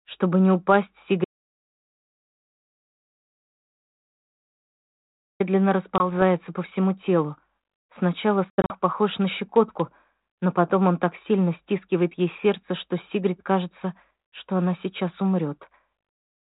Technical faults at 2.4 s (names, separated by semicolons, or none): audio dropout to silence